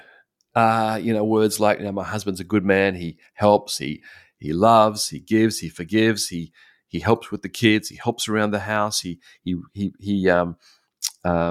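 At 3.97 to 4.00 s, just before "he loves", the speech briefly smears into a noisy, phasey patch. This is AAC frame loss with concealment. About 21 ms of coded audio went missing, which fits a single lost frame, and the decoder rebuilt the gap from the preceding spectrum rather than leaving a hole. Unlike a dropout or buffer glitch, there is no click and no silence, just a blurred texture before the speech carries on.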